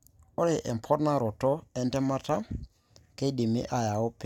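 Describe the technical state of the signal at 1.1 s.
At 1.1 s the speech signal is intact, with no dropout, clipping, glitch or other audible fault at that moment.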